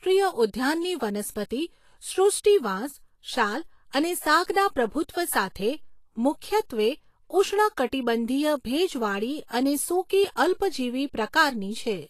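From start to finish the speech carries plainly audible codec damage, likely Vorbis compression at a low setting, something around 35 kbps by the sound of it. Nothing survives above 14.2 kHz, and the remaining treble comes out hissy and grainy, with roughened tones and softened attacks.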